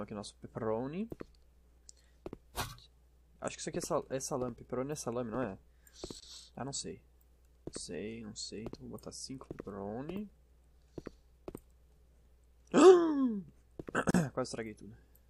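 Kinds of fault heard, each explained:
Gap at a join of encoded pieces: Separately encoded segments were spliced with their start-up silence and end padding left in. The sound drops out for 25 ms at 6.2 s and 38 ms at 14.1 s. Each break has softened edges, then resumes where it stopped.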